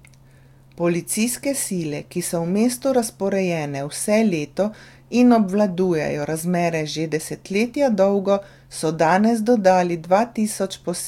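No technical faults are audible.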